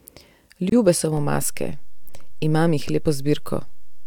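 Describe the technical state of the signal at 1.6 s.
A DC step starting at 1.17 s, where the waveform's zero line jumps and stays offset to the end; a low thump marks the jump, and the speech continues unchanged.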